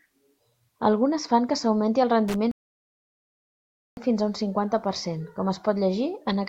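At 2.28 s, a loose connector crackle runs for about 70 ms until 2.36 s. A worn or dirty contact is making and breaking, chopping the speech into a scratchy burst. The waveform shows jagged gaps and spikes, and the spectrogram shows thin, broadband vertical streaks.

From 2.51 s to 3.97 s, a rebuffering stall drops the speech to dead silence because the player ran out of downloaded audio. It resumes exactly where it stopped, with nothing lost but 1.46 s added. The waveform is a flat line, and the spectrogram is an empty gap.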